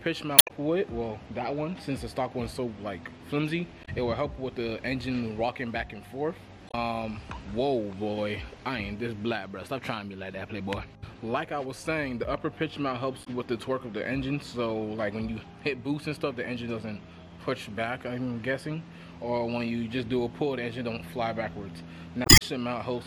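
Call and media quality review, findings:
Damaged data in the compressed stream: short glitches at 0.35–0.51, 3.81–3.89, 6.66–6.74, 13.21–13.27 and 22.22–22.42 s. Decoder misreads corrupt frames, loses sync and jumps ahead to the next header. Spectrogram shows broadband vertical smears; waveform shows abrupt discontinuities.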